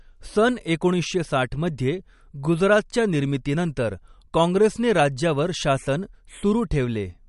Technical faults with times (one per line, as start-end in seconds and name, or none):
0.00-7.29 MP3 compression